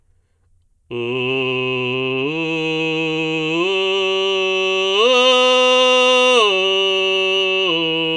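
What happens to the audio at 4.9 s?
At 4.9 s the music plays through cleanly, with no dropout, click, distortion or other fault.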